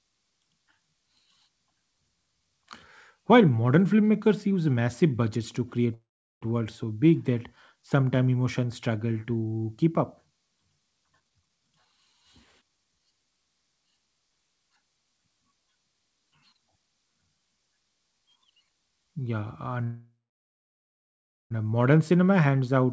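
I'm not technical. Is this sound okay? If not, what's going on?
No. The speech has two kinds of problem.

Call audio freeze: twice, packets carrying the speech were likely held up in transit, and the receiver's small reserve of audio ran dry. From 5.94 to 6.43 s, between "massive budgets to create" and "worlds so big that", the last sound drags on as a fading buzz and then drops to silence for about 0.4 s. From 19.84 to 21.52 s the same thing lasts 1.7 s, with about 1.4 s of silence. Each time the speech resumes where it stopped, so nothing is lost, only delayed.

Jitter buffer speed-up: after a delay, the receiver had too much audio waiting and caught up by cutting out tiny slices many times in a row. From 11.11 to 12.14 s the speech runs at about 140% speed, sounding hurried at normal pitch, with roughly 0.4 s trimmed away. From 22.45 to 22.84 s there is a milder rush, about 110%. Throughout, the call connection keeps nothing above 8 kHz, which takes some crispness off the sound.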